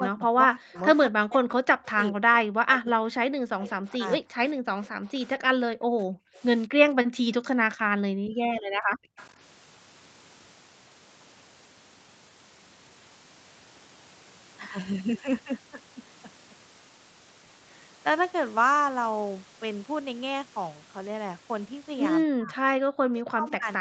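Speech suppressed in double talk runs from 0.0 to 4.37 s. Likely the echo canceller could not separate the near talker from loudspeaker echo, so the speech dips by as much as roughly 40 dB.

Echo leak appears at 0.76 to 0.80 s, 5.07 to 5.27 s, 6.35 to 6.40 s and 9.17 to 9.29 s. Residual loudspeaker pickup likely returns as faint delayed copies about 220 ms behind the speech, at about 25 to 35 dB below it.

Background gated by the echo canceller occurs from 4.65 to 9.17 s and again from 22.84 to 23.03 s. The microphone is pulled down hard while the loudspeaker plays, so the room sound drops by about 32 dB before returning.

Speech suppressed in double talk returns from 22.24 s to the end. Overlapping talk likely again pushes the voice down, by roughly 30 dB in the deepest dips. Throughout, the sound stops at 8 kHz, consistent with a wideband Opus call path.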